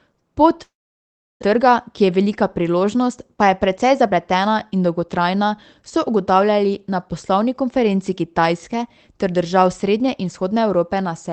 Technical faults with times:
0.63-1.44 long network dropout
1.52-4.36 jitter buffer speed-up

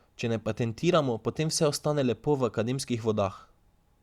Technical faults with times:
none

